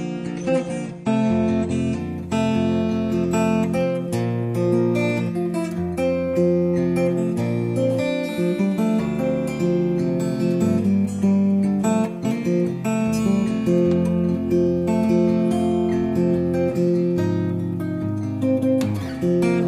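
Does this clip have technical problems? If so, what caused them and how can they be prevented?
Yes: an adaptive stream starting at a low bitrate. From 0 to 2.0 s the treble is dull, with nothing above 9.8 kHz and heavier codec artefacts, which fits roughly 32 kbit/s AAC, before a gapless step up to fuller quality. A spectrogram shows a flat ceiling that lifts abruptly at 2.0 s. Starting playback only after measuring bandwidth, or fetching a higher-bitrate first segment, prevents it.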